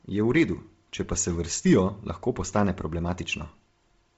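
Throughout the speech, nothing reaches above 7.7 kHz. The top of the band sounds grainy and breathy. Noise fills in where real detail has been stripped out. This is likely Bluetooth LC3 compression. The heavy damage points to a low bitrate near 24 kbps with short 7.5 ms frames.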